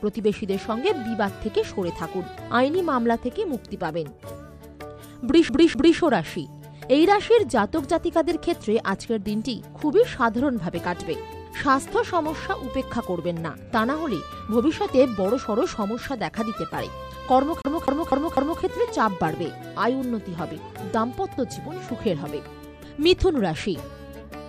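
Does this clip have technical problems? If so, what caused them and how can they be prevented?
Yes. At 5.49 to 5.99 s, and again at 17.62 to 18.62 s, the sound locks into a quick, even stutter: the same quarter-second fragment repeats, with a tiny mute at each jump, twice the first time and four times the second. This is a CD stuck on one turn, where a scratch makes the laser jump back a track at the same point on every rotation, replaying a loop of about 0.25 s. Cleaning or resurfacing the disc, or ripping it with an error-correcting ripper that re-reads damaged sectors, would prevent it.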